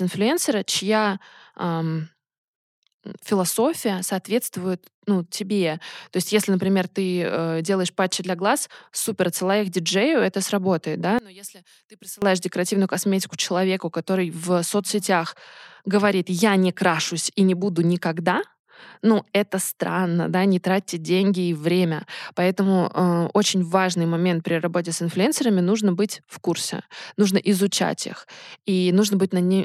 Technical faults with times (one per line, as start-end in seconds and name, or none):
11.19-12.22 one channel inverted